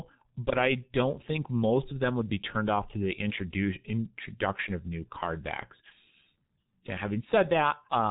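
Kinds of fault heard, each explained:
G.723.1 codec: Heavy damage throughout, with nothing above 3.8 kHz, so the speech sounds muffled. The hoarse, smeared texture and blurred consonants come from a very low-rate coder rebuilding speech from a coarse, slowly updated model, which fits a bitrate around 6 kbit/s.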